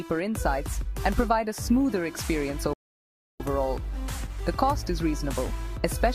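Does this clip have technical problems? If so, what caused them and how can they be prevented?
Yes: a rebuffering stall at 2.73 to 3.40 s, where the player's buffer ran dry, so the sound drops to silence, then resumes exactly where it stopped, adding about 0.67 s. Preventing it means buffering more audio ahead of playback or streaming at a lower bitrate when the connection slows.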